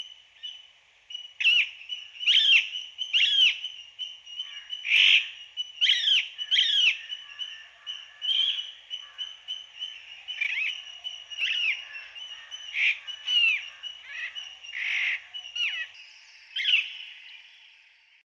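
From 11.39 to 12.19 s the sound drops in pitch by about a semitone (101 cents) and slows by 5.6%, then snaps back. This is likely a drift correction step, where clock-matching software briefly changed the playback rate to rebalance its buffer.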